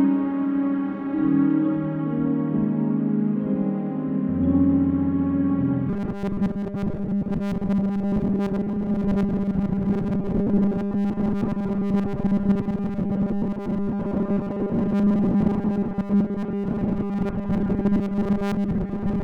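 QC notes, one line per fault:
5.89 to 19.24 s, robotic sound from repeated short buffers: from 5.89 s to the end, the audio becomes a rigid, metallic buzz at 200 Hz that tracks the original sound only loosely. The likely cause is new audio arriving too seldom, so the software plugs each gap by replaying its last 5 ms chunk, about seven-tenths of the time, while the real material is skipped. Those repeats impose a fixed 200 Hz rate, one over the chunk length.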